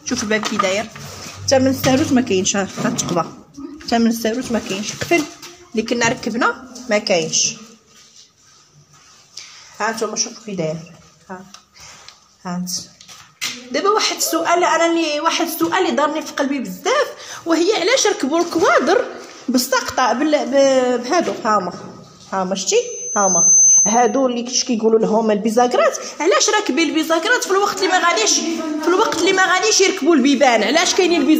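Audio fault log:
22.72–24.27 s, loudspeaker feedback squeal: a single tone at 6.2 kHz swells over roughly 0.7 s to sit about 5 dB above the programme. The microphone is re-amplifying its own loudspeaker, and at that frequency the loop gain exceeds one, so the tone feeds itself until the loop is broken.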